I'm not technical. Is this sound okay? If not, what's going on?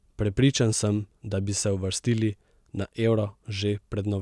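Yes, this recording is fine. Nothing in it points to a technical problem.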